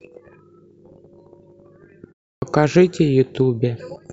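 At 2.35 s, after a pause of about 0.3 s, the output path has dropped into a low-power state and is still waking up when the speech resumes, a clipped start after a pause. The first 71 ms of sound, up to 2.42 s, never reaches the output, so the word comes in abruptly out of the silence with its opening sounds missing.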